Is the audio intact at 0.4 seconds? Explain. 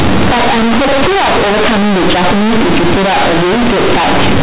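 No. At 0.4 seconds the audio suffers from companded audio read as linear, which lasts the whole clip. Its mu-law telephone bytes are played as plain 8-bit samples without expansion. Quiet parts swing as wide as loud ones, giving harsh, buzzy distortion and heavy noise in pauses.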